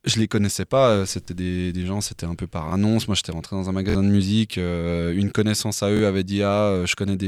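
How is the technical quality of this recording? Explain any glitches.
There are four short stutters from a repeated buffer. At 1.25 to 1.28 s (just before "des gens c'était un"), 2.69 to 2.72 s (after "c'était un peu par") and 5.97 to 5.99 s, a roughly 23 ms chunk plays twice. At 3.90 to 3.95 s, between "j'étais rentré dans un" and "de musique", it plays three times. New audio arrived late, so the device replayed its last block, which fits a 1024-sample buffer. Each stutter has hard joins and drops about 20 ms of audio, or about 50 ms at the longest one.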